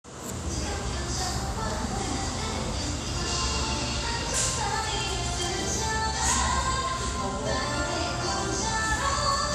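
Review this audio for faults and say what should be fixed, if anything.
Across the whole clip the top end is dull and the sound carries a gurgling, granular roughness, plainly audible throughout. The likely cause is MP2 compression at a rate that fits about 80 kbps. Layer II divides the spectrum into 32 equal sub-bands and, short of bits, switches upper bands off and quantises the rest coarsely. That separates it from a simple low-pass filter: the highs flicker in and out rather than stopping at a fixed cut-off. To prevent it, re-encode from the original source at a higher bitrate or with a more efficient codec.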